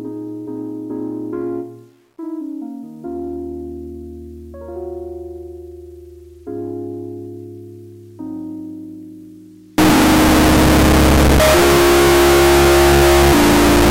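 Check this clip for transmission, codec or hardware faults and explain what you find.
One fault stands out, running from 9.78 s to the end of the clip. Throughout that stretch the sound becomes a very loud, harsh distortion, and quiet moments are as loud as everything else. The likely cause is signed and unsigned mixed up in 8-bit samples. Reading the samples with the wrong sign convention flips the top bit, so each zero crossing lurches across the full range and is heard as a violent edge. Plain 8-bit quantisation only adds hiss-like grit well below the signal. Clipping flattens only the loudest peaks. This fault instead distorts and inflates even the quietest parts.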